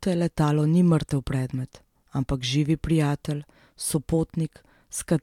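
A short bit of speech, and there's nothing technically wrong to flag anywhere in it.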